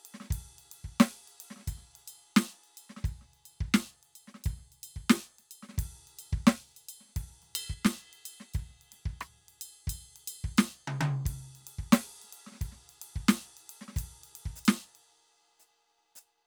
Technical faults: one channel drops out

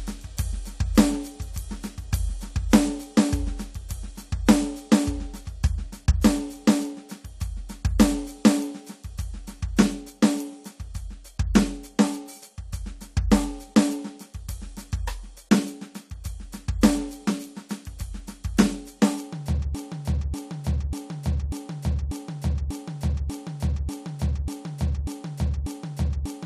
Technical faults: broken-record loop

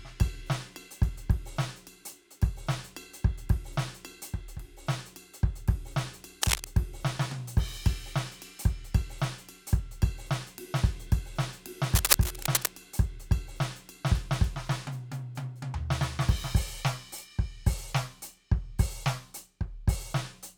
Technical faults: cable scratch noise

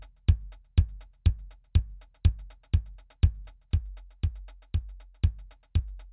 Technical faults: none

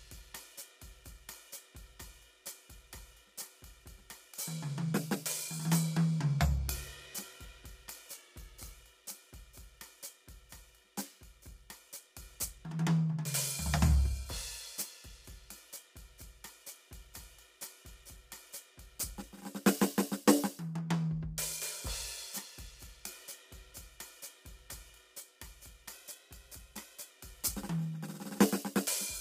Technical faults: low-delay AAC compression; drift correction step

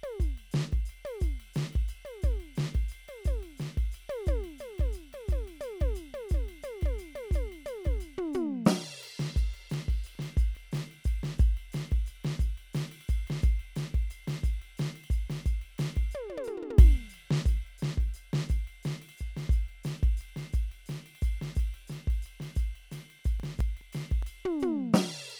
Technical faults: CD scratch ticks

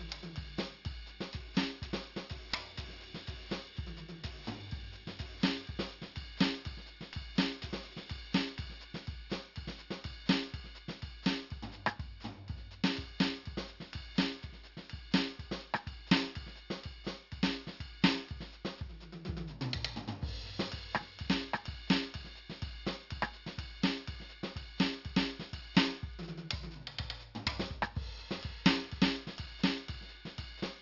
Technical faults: aliasing

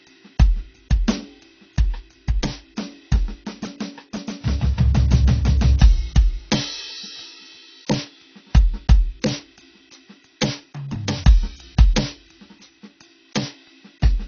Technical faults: AAC compression

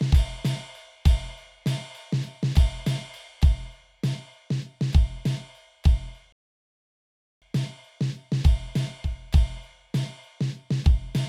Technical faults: rebuffering stall

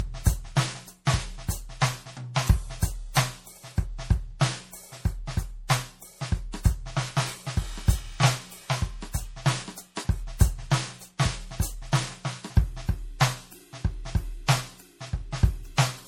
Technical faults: generation loss

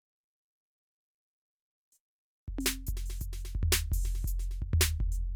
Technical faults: none

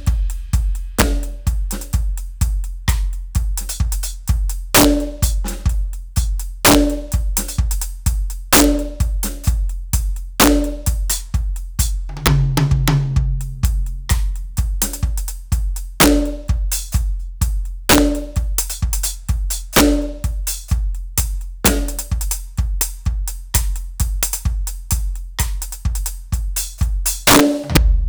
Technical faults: integer overflow

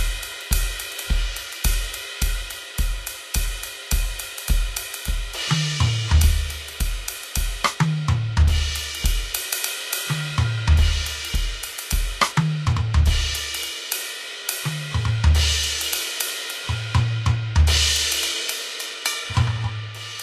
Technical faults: Vorbis compression

